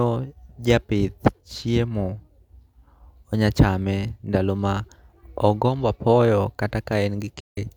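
From 7.37 to 7.58 s the speech drops into a soft-edged gap, an instance of AAC frame loss with muting. A hole of about 171 ms, which fits roughly four lost frames, was filled with zeroed spectrum, so the overlapping windows fade the sound out and back in. On a spectrogram this shows as a blank vertical band with tapered edges; the waveform thins smoothly to silence rather than cutting off abruptly.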